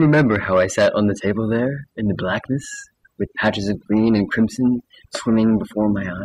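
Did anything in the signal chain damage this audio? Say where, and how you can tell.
Yes. Throughout the speech, the background drops to near silence flecked with twinkling specks. That is overdone noise removal at the processing stage: bands near the noise estimate are pulled far down or shut off, taking quiet voice detail with them.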